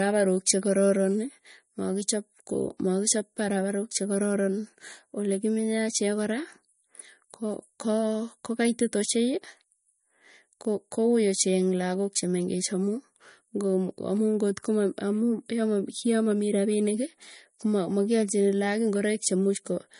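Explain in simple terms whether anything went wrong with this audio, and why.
The speech has plainly audible compression damage from start to finish, most likely from MP3 compression at a low quality setting. Nothing is left above about 10.6 kHz, so the top of the sound is missing and s sounds lose their crispness. When the encoder runs short of data, it drops the faintest parts of the sound. Those parts flicker on and off from moment to moment, which gives the voice a watery, swirly quality.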